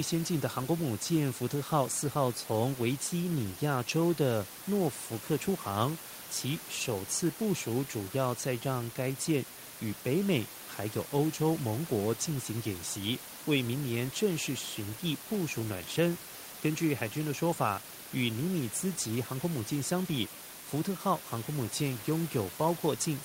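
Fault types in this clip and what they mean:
No technical faults are present in the signal, and the room's own background sits about 18 dB below the speech.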